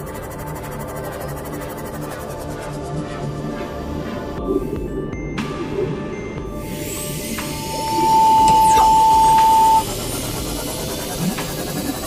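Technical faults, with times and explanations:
7.41–9.87 s, loudspeaker feedback squeal: a lone 885 Hz tone swells within about a second to roughly 15 dB above the sound, unlike a steady test tone.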